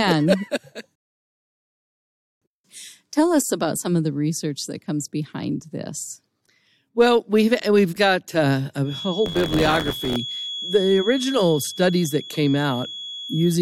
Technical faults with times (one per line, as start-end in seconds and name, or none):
0.95-2.42 rebuffering stall
8.82-13.62 feedback whistle
9.25-10.16 buffer tearing